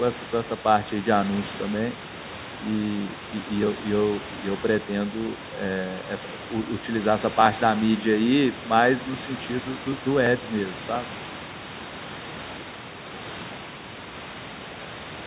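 There are no technical faults to describe in this speech recording.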